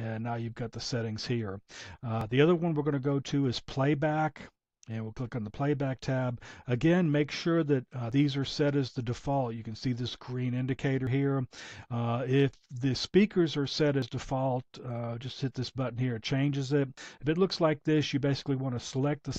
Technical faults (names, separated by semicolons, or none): audio missing between chunks